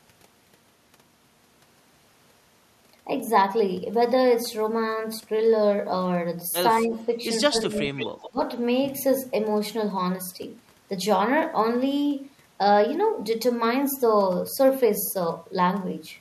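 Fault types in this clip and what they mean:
Speech suppressed in double talk: at 6.82–7.1, 7.49–7.8 and 8.3–8.4 s the voice dips by up to about 20 dB, likely from an echo canceller ducking the talker while both sides spoke.
Echo leak: at 7.96–8.3 s a copy of the voice returns 177 ms late, about 10 dB down, likely loudspeaker pickup the echo canceller failed to remove.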